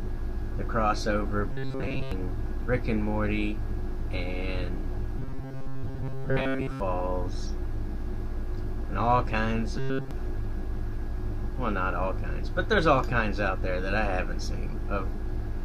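At 1.52 to 2.12 s, again from 5.19 to 6.80 s, and briefly at 9.78 to 10.11 s, the sound goes rigid and metallic, with a fixed buzz at 134 Hz. That's robotic sound from repeated short buffers, likely caused by audio arriving too slowly, so the same slice of about 7.5 ms gets replayed in place of what was skipped. Most of the first two stretches are repeats, and the last one is repeats throughout.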